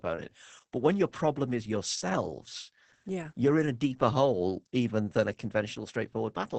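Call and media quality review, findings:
Opus voice compression throughout: speech muffled, hoarse, faintly robotic, capped near 8 kHz. SILK linear-prediction coding with coarse excitation, consistent with roughly 10 kbps.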